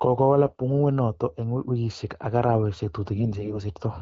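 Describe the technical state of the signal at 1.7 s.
At 1.7 s the audio is intact, with the speech passing cleanly through the AMR wideband (HD Voice) coding and no fault present at that moment.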